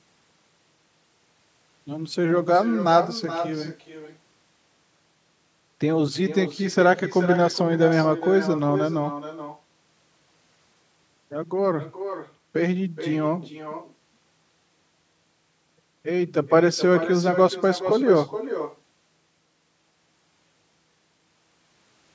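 Throughout the speech, an echo with no canceller returns the far loudspeaker's pickup roughly 0.4 s later, about 11 dB down, drawn as faint delayed copies on a spectrogram.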